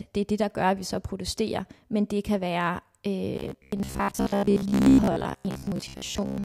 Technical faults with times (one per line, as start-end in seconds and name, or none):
3.36-6.44 robotic sound from repeated short buffers